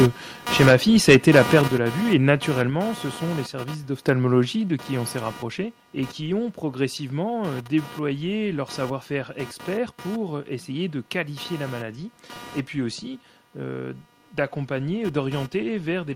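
Computer activity noise runs through the whole recording: a buzzing pulse train near 200 Hz, roughly 15 dB below the speech, swelling and fading with machine load rather than the talking. A spectrogram shows a comb of evenly spaced horizontal harmonics.

From 1.08 to 1.59 s, microphone overload adds a harsh crackle to the loudest syllables. The input was likely set about 7 dB too hot, flattening peaks at the converter limit. The waveform shows squared-off tops on around one sample in twenty, with splattered high-frequency energy above.

At 1.68 s the microphone volume is stepped down by about 6 dB, so speech and background drop together in one abrupt step, likely the call software reacting to the preceding clipping. The waveform envelope shrinks suddenly, and the spectrogram dims uniformly across all frequencies.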